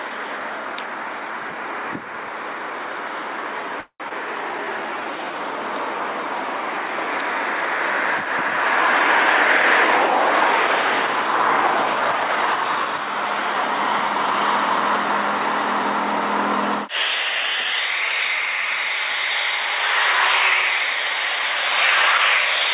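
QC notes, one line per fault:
3.80 to 4.03 s, call audio freeze: the last sound carries on as a fading buzz for about 0.2 s, ending in roughly 80 ms of silence. Playback then resumes exactly where it stopped, with nothing lost. The likely cause is delayed packets draining the jitter buffer.
4.09 to 4.13 s, skip ahead: playback jumps forward, dropping roughly 0.15 s of audio with only a tiny bridging fill. The two sides join almost directly. The drop partly offsets the delay the freeze just added.
4.51 to 5.33 s, jitter buffer slow-down: the sound runs at about 85% speed with unchanged pitch, stretched by 127 ms. Repeated pitch periods draw sounds out while the buffer rebuilds its reserve after the jump.
11.02 to 13.08 s, jitter buffer speed-up: the sound runs at about 109% speed at the same pitch and feels hurried. Around 0.2 s is trimmed in short pitch-period cuts to shed excess buffered delay. 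Throughout, nothing above 4 kHz, which fits a G.711 A-law call path.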